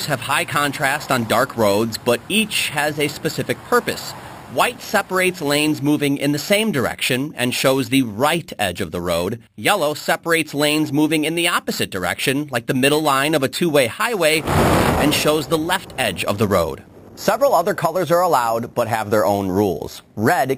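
The sound carries imaging from sample-and-hold upsampling from start to finish. Each sample was simply repeated to raise the rate, which fits 12 kHz audio stretched to 48 kHz. Mirror copies fill 6 to 12 kHz at about -15 dB, giving a metallic fizz that tracks the level.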